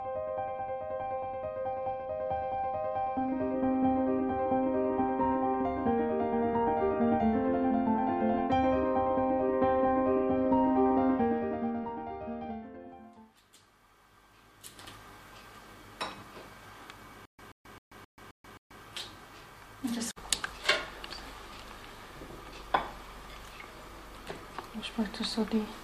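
Bluetooth SBC bit pool drop, from 1.55 to 3.53 s and again from 10.38 to 12.63 s. Both times the top end dulls and a gritty grain rises across the sound, which fits the encoder's bit pool falling from about 31 to 11, near 83 kbps, on a congested link. With so few bits, the highest sub-bands get almost nothing and the rest are coarsely quantised until the rate recovers.

Stutter with silent gaps, from 17.25 to 18.82 s. A burst about 130 ms long repeats six times at an even 264 ms pace, with about 134 ms of digital silence between repeats. The likely cause is a stalled player or stream that replayed its last fragment at each retry and then ran empty. The audio that belonged in this stretch never plays.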